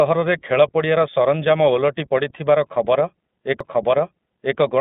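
From the start the whole clip has the iLBC codec on it: the speech is band-limited to the old phone line, with nothing above 3.8 kHz, and sounds plainly rough and synthetic, as each 20 ms frame's excitation gets coded on its own. That fits the 15.2 kbps mode.

At about 3.60 s there's a CD skip: the laser jumped to another turn of the spiral, so playback mutes for a couple of milliseconds, ticks, and picks up at a different spot, leaving an abrupt discontinuity in the speech.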